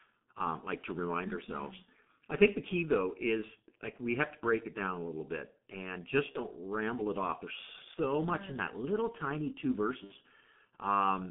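The speech runs throughout through a G.723.1 codec at a very low rate, which fits about 6 kbit/s, squeezed into a line band of roughly 150 Hz to 3.5 kHz. The heavy coding leaves the voice muffled and hoarse, with smeared consonants.

VoIP packet loss concealed by the speech codec occurs at 6.32–6.39 s and 7.94–7.98 s, each consistent with one lost 30 ms frame, and at 10.04–10.12 s, which fits two lost frames. The decoder extends its previous pitch and filter while fading, so each gap is stretched into a fading buzzy tone or coloured noise, and the voice stays weak briefly before it recovers.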